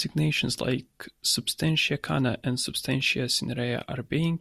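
Nothing in this bit of speech jumps out as a technical problem; there's no fault to point to anywhere along the way.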